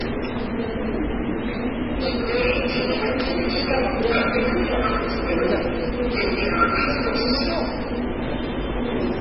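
From start to finish the sound has nothing above 5.6 kHz and carries a watery, swirling smear on its transients, which is most likely low-bitrate audio saved at a high bitrate. An earlier MP3 pass at a very low bitrate, around 16 kbit/s, stripped the top band and left those artefacts, and a later high-bitrate MP3 encode only preserved that damage. A plain low-pass filter would give the same ceiling without the smeared, warbling texture underneath.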